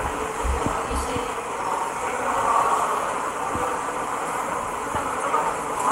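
No technical faults can be heard in the sound, so there are none to describe in time order.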